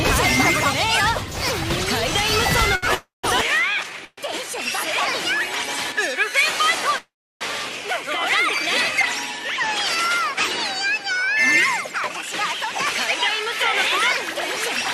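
At 2.75 s a short stall from a late packet holds the sound for 2.75–2.85 s. A packet missed its playout time, so the receiver stretched the last stretch of audio by 71 ms and then resumed where it left off, with nothing lost. It is heard as a brief sustained smear with a faint buzz. On a spectrogram the harmonics run flat and unchanging for that instant, and the waveform shows a few near-identical repeated cycles.

From 2.95 to 3.26 s a call audio freeze follows. The audio turns into a fading buzz, then goes silent for about 170 ms, inserting 291 ms before the sound picks up again with nothing missing. The likely cause is packets held up in transit, which left the jitter buffer empty while the receiver filled the wait. A spectrogram shows a smeared, decaying band, then a blank column. The waveform tapers to a flat line.

At 3.41 s the tone changes and stays that way to the end. The top end dulls, with nothing above 12.3 kHz, and a new background hiss appears about 45 dB below the signal. 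There is no gap at the change, and loudness stays roughly the same. This is most likely an input switched to a poorer device with a narrower band. On a spectrogram a hard ceiling appears at 12.3 kHz, and the quiet stretches between sounds gain a faint noise floor.

Between 3.90 and 6.31 s a jitter buffer slow-down plays the audio at 97% speed with its pitch unchanged. The receiver repeated single pitch periods and slivers of pauses, adding 78 ms in total to rebuild its reserve. Sounds feel slightly drawn out. On a waveform, repeated periods sit side by side. A spectrogram shows harmonics that are minutely lengthened rather than shifted in frequency.

Inside that stretch, from 4.05 to 4.19 s, a second call audio freeze inserts 127 ms. It is a brief buzz followed by about 40 ms of silence, likely from another delay in packet delivery. It shows as a short smeared patch and a narrow gap.

The third call audio freeze, from 6.98 to 7.43 s, is the longest. 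It fills 427 ms, about 320 ms of which is silence after a decaying buzz, and its likely cause is again held-up packets. It shows as a wide blank column on the spectrogram and a flat stretch in the waveform.

From 12.13 to 12.71 s a jitter buffer speed-up runs the audio at 105% at the same pitch. The receiver trimmed short runs of pitch periods, around 40 ms altogether, to shed excess delay. The result sounds faintly hurried. On the waveform, cycles are missing at the splice points, and on a spectrogram the events are slightly compressed in time.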